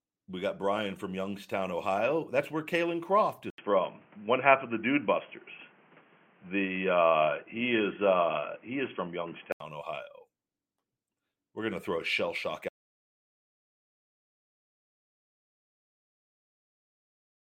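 An input switched to a poorer device from 3.50 to 9.60 s: after an 80 ms silence the speech turns dull and boxy, with nothing above 3.3 kHz, a level shift of about 5 dB and new background noise about 35 dB down, likely a change to a lesser microphone or headset profile.

An audio dropout to silence begins at 12.69 s, just after "throw a shell shock", and lasts to the end. The speech cuts out into silence with no room tone, likely because the input was lost while the recorder kept writing.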